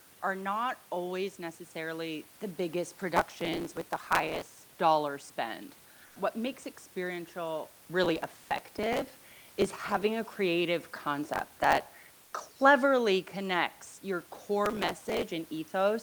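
Processor overload crackle runs from 3.17 to 4.79 s, between "always necessarily the biggest" and "dollar spend". It returns at 8.04 to 10.03 s, 11.25 to 11.93 s (after "a creative"), and 14.66 to 15.23 s. The processor misses buffer deadlines in long runs, and each late block is simply skipped. The tiny hard-edged gaps pile up into gritty tearing over the speech, consistent with a buffer of under a millisecond.

Comfort noise in place of the background appears at 6.06 to 6.16 s (100 ms) and at 12.25 to 12.33 s (80 ms), just before "cleverly connects your". The room noise, about 30 dB below the speech, briefly becomes flat, featureless hiss about 2 dB and 1 dB quieter. This is likely discontinuous transmission substituting synthetic noise during pauses.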